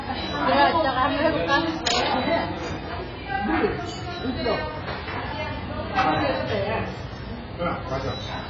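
Sounds fill the clip, with AAC compression damage throughout. Nothing is heard above 7.5 kHz. The top end is dull. Sustained sounds smear and fizz. The likely cause is heavy AAC-LC coding at a very low bitrate, around 12 kbps.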